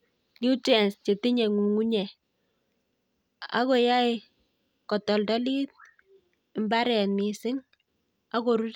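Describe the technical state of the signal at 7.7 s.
At 7.7 s the speech signal is intact, with no fault audible at that moment.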